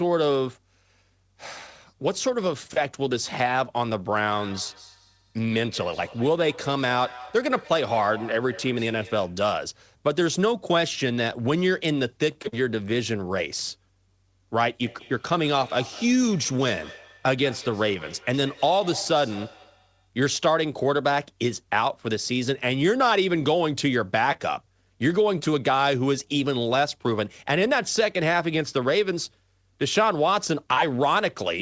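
From 4.35 to 9.44 s and again from 14.85 to 20.09 s, the speech returns as thin, ringing repeats about a fifth of a second apart, peaking about 19 dB below the speech. This is feedback echo between two devices: one device replays another's microphone, which picks it up again.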